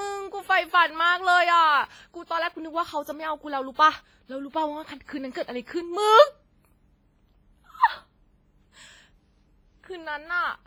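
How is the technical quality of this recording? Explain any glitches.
The quality is poor, with heavy codec damage throughout the speech. Throughout, the likely cause is WMA compression at a low bitrate, near 24 kbps. Long blocks smear quantisation noise and drop weak detail, so the speech rings and sounds washy under a breathing hiss.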